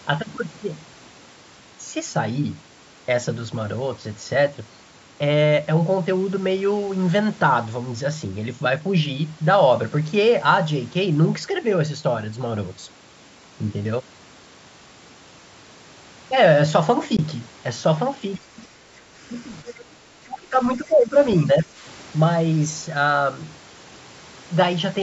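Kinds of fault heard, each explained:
Bluetooth dropout: A single brief hole of about 19 ms at 17.17 s, where the speech cuts to silence and resumes further on as though it had kept running underneath. This fits one lost packet, likely wireless audio arriving too late for the headphones to play.
Other side's voice leaking through: Two short scraps of a second voice sit under the speech, a barely audible one near 18.35 s and a clearer one of about a tenth of a second near 19.7 s. This is likely far-end loudspeaker sound reaching the microphone past an incomplete echo canceller.
Speech suppressed in double talk: The talker's level sags in bursts between 18.66 and 21.82 s, from slight dips to cuts of around 25 dB lasting up to about 0.4 s. The likely cause is an echo canceller turning everything down while both sides talked at once.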